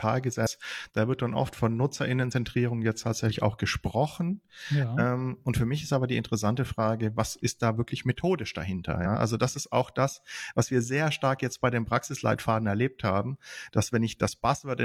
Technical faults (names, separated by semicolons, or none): compressed frames skipped